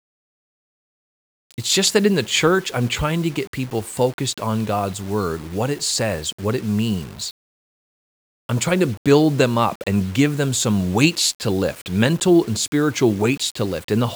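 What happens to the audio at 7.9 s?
At 7.9 s the speech has a grainy, rough distortion that follows its level, turning gritty on softer sounds and sputtering or dropping out on the quietest parts. It runs through the whole clip rather than starting there. The likely cause is low bit depth without dither: rounding to about 7 bits with no added noise leaves an error that tracks the signal, sitting only about 25 dB below it.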